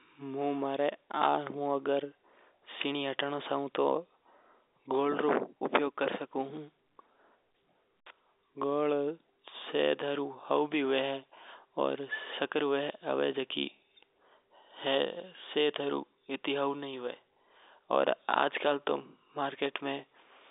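Nothing stood out on listening to this telephone-band speech.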